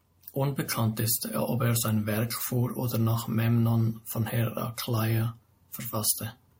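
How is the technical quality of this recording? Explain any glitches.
No glitches or technical faults can be heard anywhere in the recording; the signal stays steady and intact throughout.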